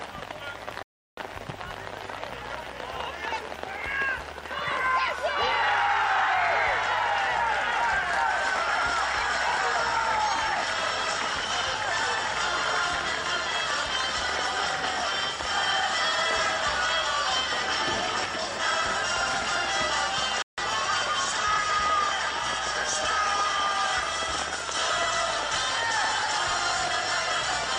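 Bluetooth stalls at 0.83 s and 20.42 s cut the sound to silence for 0.35 s and 0.16 s. The likely cause is radio interference delaying packets, so the headphones' buffer emptied and playback waited for the retransmitted audio before resuming.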